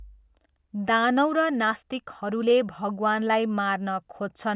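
No audible technical faults.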